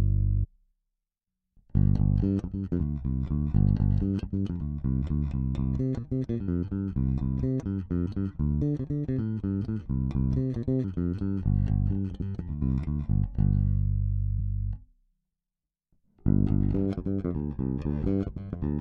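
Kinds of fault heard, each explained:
Compressed frames skipped: whole encoded frames go unplayed. The sound jumps ahead seven times, by roughly 0.15 to 0.7 s.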